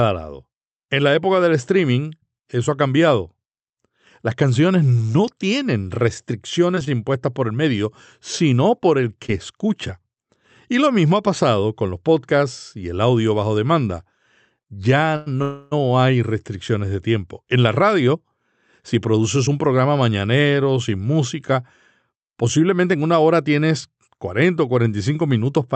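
Between 5.99 and 6.89 s come scattered short gaps: about four tiny holes, the longest around 15 ms, each patched by carrying the preceding sound forward. They come out as brief ticks and smears spread across the span, unlike the single isolated dropout that follows.

At 9.26 to 9.30 s, just after "por el", a short concealed packet loss replaces 20 ms of real audio with a continuation of the previous sound. It is heard as one quick smear, and here something is actually missing rather than delayed.

From 15.16 to 15.28 s, a short stall from a late packet holds the current sound for 99 ms until the data arrives, then resumes at the same point. Nothing is lost. The sound is stretched, with a slight buzz or dip, which is the opposite of the dropout at 9.26 s.

At 15.42 to 15.73 s, immediately before "hay restricciones de tiempo", a call audio freeze inserts 292 ms of sustained, fading buzz or hiss that never drops to silence. 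The likely cause is packets held up in transit emptying the jitter buffer. It is longer than the stall just before it.

Jitter buffer speed-up runs at 17.57 to 18.15 s, 18.95 to 19.93 s, and 22.11 to 23.04 s. The last stretch falls between "mañanero sin música" and "hora tienes". Playback rises to 109% by trimming small pitch-period slices, roughly 50 to 100 ms in each stretch. Delivery sounds hurried while pitch stays unchanged, which sets it apart from a simple playback-rate change.

The Opus call path carries it all at its 8 kHz bandwidth, with the top end rolled off.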